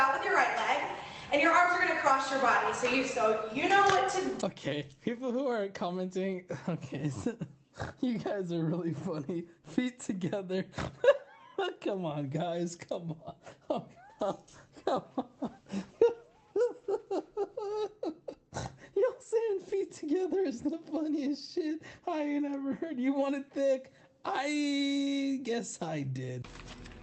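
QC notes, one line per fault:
Nothing stood out on listening to this clip.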